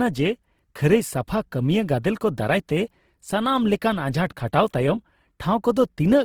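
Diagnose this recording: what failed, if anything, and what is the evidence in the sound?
The codec stage failed. The speech sounds rough and grainy from start to finish, with noise-filled texture, yet the band stays full, reaching to about 20.4 kHz. Heavy Opus compression in music mode is the likely cause, which fits roughly 16 kbps. It lacks MP3's swirling holes.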